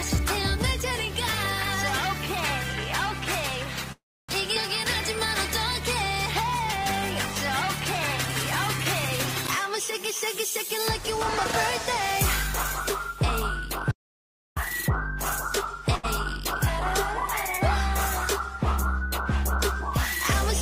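At 3.92 s packets were likely held up and the jitter buffer ran dry, so a call audio freeze stretches the last sound into a fading buzz, then about 270 ms of silence until 4.31 s, with nothing lost. At 4.55 s a stretch of audio was dropped while later audio was already waiting, so playback skips ahead by roughly a tenth of a second, its two sides joined almost seamlessly. From 13.91 to 14.57 s the input was likely lost, producing an audio dropout to silence: about 0.66 s of silence, with no room tone, and that part of the sound gone. At 15.95 s a late packet left the buffer empty for 81 ms, and this short stall holds the current sound too long with a faint buzz before it resumes where it stopped.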